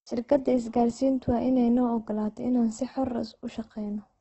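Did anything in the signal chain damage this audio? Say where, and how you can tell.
Yes. Opus compression runs through the whole clip at the codec stage, most likely from a low-bitrate encode. Nothing remains above about 8.2 kHz, and the speech has a rough, grainy texture rather than swirling gaps. That points to Opus's music mode at a bitrate near 12 kbps. With so few bits, the encoder keeps each band's overall energy but fills the detail with folded copies of lower bands or with noise, which leaves the damage heavy.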